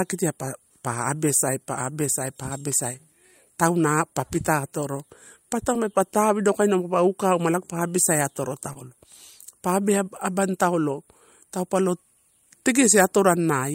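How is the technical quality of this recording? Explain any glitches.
Two short concealed packet losses, at 5.73–5.77 s and 8.73–8.77 s. About 20 ms of the speech arrived too late to decode each time. The receiver extended the preceding sound to cover it, then crossfaded back, leaving a brief smear or wobble.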